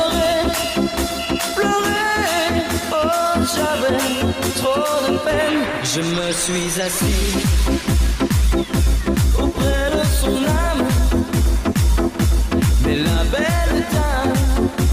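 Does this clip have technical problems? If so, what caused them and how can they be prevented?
No, there are no technical problems to report here.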